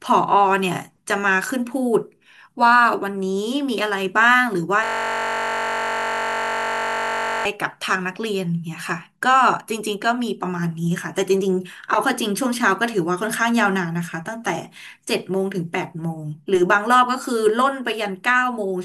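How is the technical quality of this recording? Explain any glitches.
The recording has one clear glitch. From 4.84 to 7.45 s the audio turns into a steady buzz at about 46.9 Hz. This is a system hang loop: the system froze while the hardware kept replaying one 21.33 ms slice, which fits a 1024-sample buffer.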